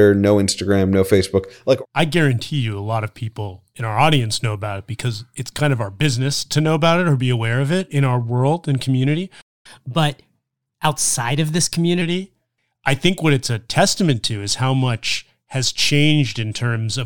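It's a speech clip, and right after "our world and community" the sound just drops out at 9.41 s and stays silent until 9.66 s, about a quarter of a second. That's a playback stall, where the output goes dead mid-flow and then resumes where it left off. The likely cause is the player running dry of data or its audio thread getting blocked briefly. From 9.66 s to 12.02 s you get the catch-up at higher speed. The player resamples its backlog to play at 1.1 times normal speed, so the voice runs quicker and sits about a semitone and a half sharp, a slightly chipmunky lift. It's clawing back the time lost in the gap, and once that's recovered, speed and pitch settle back to normal.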